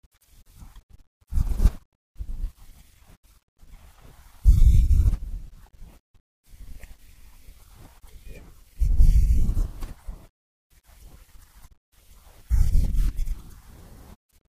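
From 1.48 s to 13.17 s a click recurs every 1.46 s, about ten, each a waveform step and a vertical line on a spectrogram. These are clock drift buffer slips, likely from clocks about 700 ppm apart, each skipping or repeating around 50 samples.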